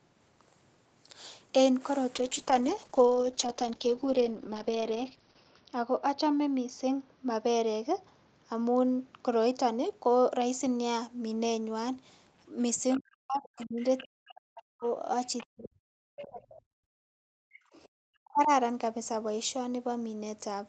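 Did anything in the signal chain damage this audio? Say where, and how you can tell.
Yes. From 2.17 s to 11.15 s the speech turns rough and watery, and the top end dulls. This is a call bitrate drop at the network and codec stage. The call's bandwidth estimate fell, so the Opus encoder went from 32 kbps down to 8 kbps and stayed at that floor for about 3.3 s. With so few bits it quantises coarsely, and its audio bandwidth narrows from 8 kHz to 6 kHz. That explains both the grit and the muffling until the rate recovers.

Faint scraps of a second voice sit under the talker at 12.94–13.00 s, 13.57–14.04 s, 14.84–15.46 s, 16.17–16.28 s and 17.73–17.78 s. They are well below the main speech. This is the other side's voice leaking through in the call processing stage. The likely cause is the far end playing from the talker's loudspeaker into the microphone, with the echo canceller leaving residue behind instead of removing it fully.

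The talker's own speech sinks almost to silence in pieces across 12.97–14.85 s, 15.49–17.62 s and 18.19–18.50 s, overlapping those leaked scraps. This is speech suppressed in double talk, again in call processing. Both sides were most likely talking at once, and the echo canceller could not tell its own talker from the loudspeaker echo. It clamped down on everything, and at its deepest the talker fell away nearly completely.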